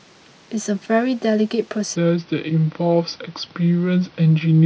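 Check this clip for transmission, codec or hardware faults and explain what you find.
One fault is present: a section at the wrong speed. From 1.96 s to the end at 4.65 s, the speech plays at about 0.775 times its recorded speed. Speed and pitch drop together at that moment. The voice turns deeper by roughly four semitones and sounds drawn out and sluggish. The likely cause is a player or editor running that stretch against the wrong clock, so samples come out slower than they went in.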